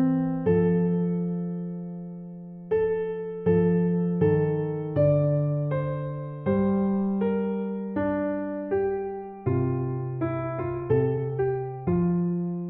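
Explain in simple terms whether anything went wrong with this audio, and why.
From 10.78 s to the end, the sound suddenly rushes ahead at about 1.55 times its earlier pace, while the pitch stays the same. This is a time-stretched section, likely from software squeezing the audio shorter by dropping tiny slices to fit a set length.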